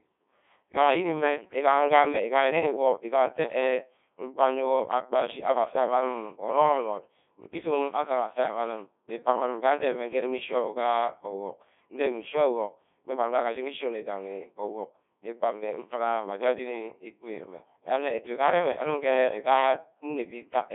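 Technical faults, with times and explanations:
Throughout, Codec 2 vocoder: the speech is rebuilt from sine waves carrying only pitch, voicing and envelope, so it sounds heavily robotic and buzzy, unlike smeared transform-codec artefacts. Band runs 250 Hz to 3.6 kHz, nothing above 3.8 kHz; the damage fits roughly 1.2 kbit/s.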